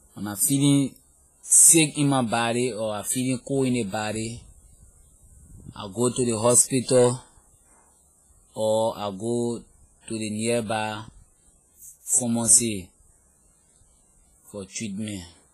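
Throughout the speech, the sound is washy and ringing, with a hiss that swells and fades along with the voice and nothing above 15.3 kHz. The cause is likely heavy WMA compression, whose long transform blocks smear quantisation noise over time, pointing to a bitrate around 24 kbps.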